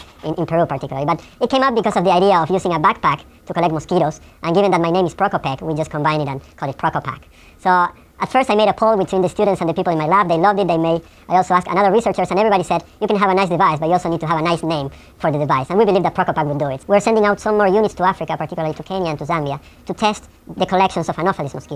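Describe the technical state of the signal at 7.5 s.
At 7.5 s, as throughout, the audio plays at the wrong sample rate: everything runs about 1.45 times fast and sits roughly 6.5 semitones high, which fits 22 kHz material played at 32 kHz. Unlike a pitch shift or time-stretch, speed and pitch move together.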